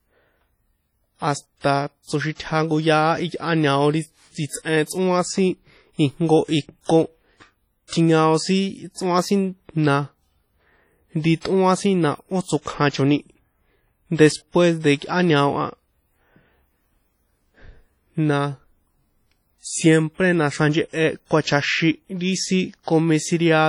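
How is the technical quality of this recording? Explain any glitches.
The quality is rough: heavy compression damage runs through the whole speech recording, and it sounds like it's most likely WMA compression. The transform coder smears its quantisation noise over tens of milliseconds and drops weak spectral detail, so the speech comes across ringing and washy, with a hiss that swells and fades along with the voice. Nothing is left above 19.9 kHz, and the amount of damage fits a low bitrate of around 32 kbps.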